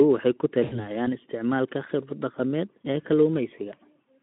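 At 0.64 s, after "waxay ku", comes VoIP packet loss concealed by the speech codec. About 80 ms was lost, which fits four 20 ms frames. The decoder stretched its last pitch with falling gain. Speech smears into a fading buzz or coloured noise, still weak until 0.89 s.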